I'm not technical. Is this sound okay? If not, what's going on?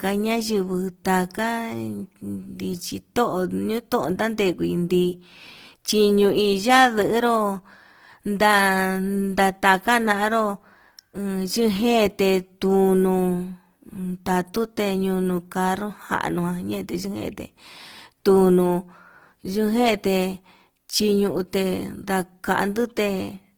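No. All the way through, the speech has a grainy, rough texture. Sounds that should be smooth come out fizzy and noisy, like they've been sanded down. That's most likely Opus compression, squeezed hard to save space. When it runs short of data, this kind of encoding patches over missing detail with filler noise instead of leaving gaps, which gives the rough, gritty edge you can plainly hear.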